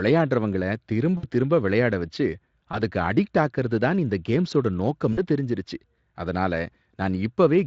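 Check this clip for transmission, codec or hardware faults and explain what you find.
The clip has one kind of fault, VoIP packet loss concealed by the speech codec, at 1.17–1.26 s before "திரும்ப விளையாட வச்சு", 2.71–2.81 s before "அடிக்ட் ஆக்கறது தான் இந்த", and 5.13–5.19 s before "தெரிஞ்சுருச்சு அதனால". About 60, 20 and 40 ms were lost. The decoder extended its last pitch and filter at falling gain, so the speech smears into a fading buzz instead of a clean silent gap, and stays weak just afterwards.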